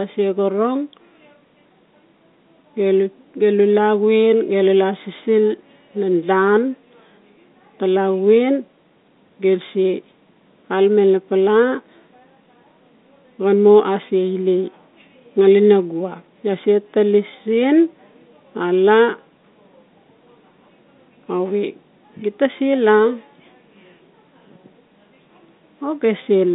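No faults are audible in the speech; it sits on an ordinary G.711 telephone line, band-limited to roughly 200 Hz to 3.7 kHz as expected for that path.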